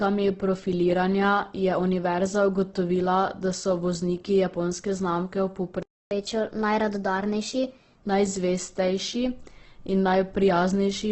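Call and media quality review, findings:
Opus compression throughout, likely low-rate CELT mode, around 12 kbps: nothing above 8.2 kHz, heavy grainy roughness on the speech, few spectral holes, so less MP3-style swirl.

Playback stall, 5.83–6.11 s: output silent for 284 ms mid-flow, player likely starved or blocked.

Catch-up at higher speed, 6.11–8.01 s: player resamples its backlog at 1.15x. Tempo and pitch rise together, roughly two semitones, then return to normal. A plain pitch shift would not speed the speech up.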